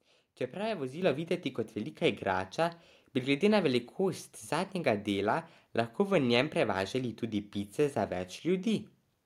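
At 1.02 s the microphone volume steps up: the call software judged the input too quiet and raised the device's gain by about 6 dB in a single jump. The speech and the room background get louder together at that instant and stay there. That is what separates it from a talker leaning toward the microphone, where only the voice would rise, and from a gradual gain ramp, which would swell over time rather than snapping up at once.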